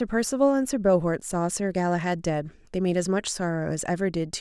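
No audible technical faults.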